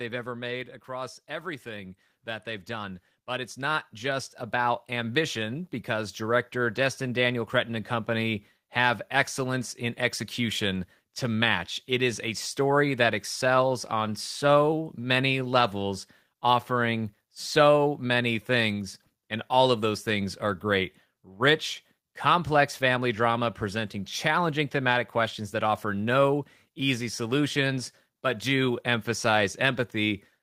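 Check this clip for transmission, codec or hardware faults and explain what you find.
Two automatic gain control faults show up right at the start of this speech clip, and they run into each other.

From 0.05 to 0.91 s there's automatic gain falling. The gain control decides the input is too hot and pulls its gain down by about 4 dB, so the opening sits loud and then sags slightly, background and all.

Then from 0.86 to 10.09 s comes automatic gain rising. The control now judges the input too quiet and climbs back up by about 15 dB. You hear the speech and the room noise swelling together slowly over those nine or so seconds.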